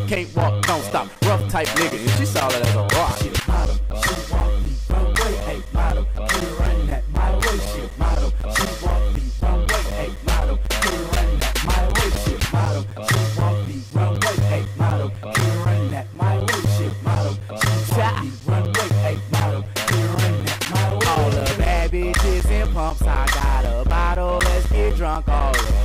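From 0.16 s to 25.66 s, periodic USB or driver dropouts recur every 0.25 s: the bus or driver stalls, leaving gaps of around ten milliseconds filled with silence. They sound as a steady ticking, and a waveform shows evenly spaced flat notches, which appear on a spectrogram as thin vertical broadband lines.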